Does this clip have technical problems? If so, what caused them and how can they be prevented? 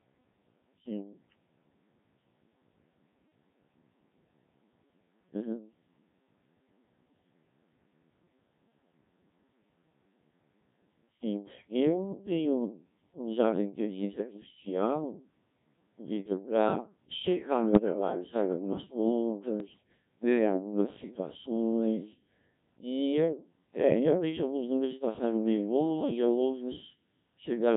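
Yes. The Codec 2 vocoder is at work throughout. The speech is rebuilt from pitch, voicing, energy and a coarse spectral envelope, not the original waveform, so it sounds heavily robotic and buzzy, which fits a very low mode around 1.3 kbit/s. To prevent this, record or relay through a higher-bitrate codec that preserves the waveform.

Bit errors on digital voice radio occur at 17.72 to 17.94 s and 19.60 to 19.83 s. Corrupted bits, a few percent in the first burst and more in the second, scramble whole frames' parameters, causing sudden pitch, level and timbre jumps into warbling gibberish. To prevent this, keep the link within solid coverage or add stronger error protection.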